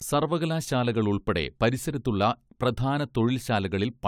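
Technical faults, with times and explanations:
Nothing in the speech stood out as a technical problem on listening.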